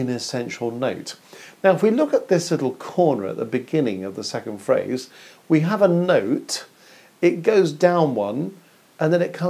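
No technical faults can be heard anywhere in the recording. Nothing in the audio calls for further comment.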